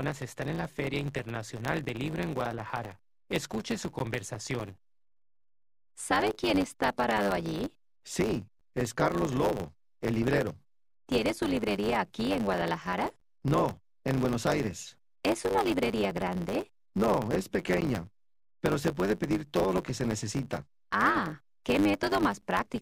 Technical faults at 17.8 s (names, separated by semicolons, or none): block size mismatch (truncated); gap between chunks